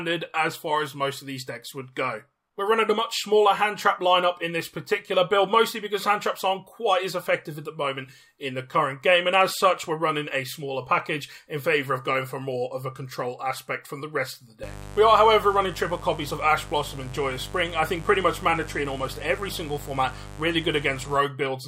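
From 14.63 to 21.17 s a mains buzz enters: switching spikes on 50 Hz mains give a raspy, harmonic-rich rasp roughly 15 dB down, harsher than a smooth hum.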